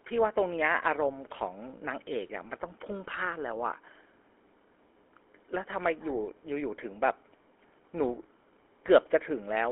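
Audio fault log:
Throughout: GSM full-rate codec. The speech is squeezed into a narrow telephone band of roughly 300 Hz to 3.4 kHz, so it sounds thin and boxy. A plainly audible buzzy, gravelly roughness runs through the speech. This codec keeps a model of the vocal tract and excites it with a sparse, regularly spaced pulse train. The decimated excitation replaces the natural fine structure of the voice with a coarse, rasping texture, and the rate of about 13 kbps points to the original full-rate scheme.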